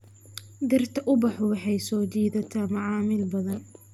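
Listening through the speech recording, nothing stood out as a technical problem at any point.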